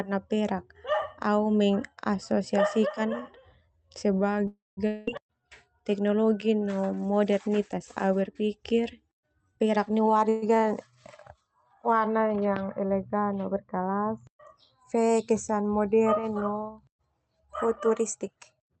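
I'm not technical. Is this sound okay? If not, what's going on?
No. Three kinds of fault can be heard in this speech.

Call audio freeze: at 4.47 to 4.79 s and again at 10.29 to 10.44 s, the sound likely stalled because pieces of the call arrived late and the receiver ran out of audio to play. It filled the wait by stretching the last sound into a fading buzz. The first time, that lasts about 0.3 s and ends in roughly 0.17 s of silence. The second is about 0.13 s with no silence. Afterwards the speech picks up exactly where it stopped, so nothing is lost, but it now runs that bit later.

Long network dropout: right after the first freeze, from 4.87 to 5.09 s, the audio likely stopped arriving altogether. Again the last sound is stretched into a fading buzz, but this time the 0.2 s that should have played there never comes back. When the speech resumes, it has jumped ahead past the missing part.

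Jitter buffer speed-up: from 9.56 to 10.23 s, and again from 17.89 to 18.76 s near the end, the receiver had built up too much waiting audio and trimmed tiny slices out of it to catch up. Around 0.2 s is removed each time, so the speech plays about 30% fast in the first stretch and about 20% fast in the second. The pitch stays the same, but the talking sounds rushed.

All of this travelled over a normal call connection, which also limits the sound to frequencies below about 8 kHz.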